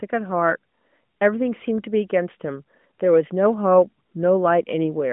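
No faults detected in this speech; the band tops out around 3.5 kHz, as expected for a narrowband mobile channel.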